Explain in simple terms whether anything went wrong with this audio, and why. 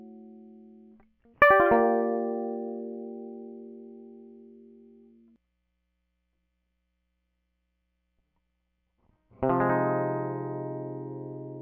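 The music's sample rate was raised from 16 kHz to 44.1 kHz by simply joining samples with straight lines, causing imaging from linear upsampling from start to finish. The top end sounds dulled, and faint mirrored copies between 8 and 16 kHz add a light metallic shimmer.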